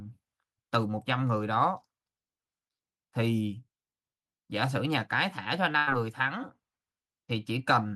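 At 5.77 s a burst of packet loss interrupts the speech until 5.89 s. Several consecutive packets failed to arrive in time, and the receiver concealed the gap by extending the last decoded sound for about 94 ms while lowering its level, so it decays instead of stopping abruptly. When playback resumes, roughly 100 ms of the original speech has been skipped, which produces an audible jump in the speech.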